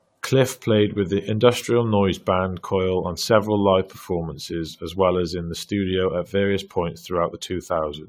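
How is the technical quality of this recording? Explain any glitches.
The speech has a persistent codec fault. Throughout, it sounds swirly, smeared and hollow, with blurred attacks and nothing above 19.2 kHz. The likely cause is generation loss: about seven passes of AAC-LC coding, consistent with 96 kbit/s. Each pass re-quantises on a shifted frame grid, so the damage is worse than one encode at that bitrate.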